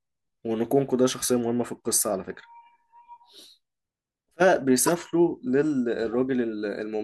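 At 4.87 to 4.91 s, a corrupt frame decoded briefly breaks the speech. Damaged bits in roughly three compressed frames were played as if valid. Misread gains and codes put energy at wrong frequencies. It sounds like a chirp, squeak or blip, peaking loud, around -10 dBFS.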